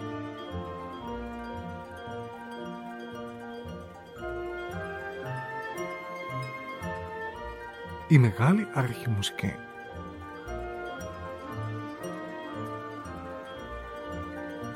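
No technical faults are audible.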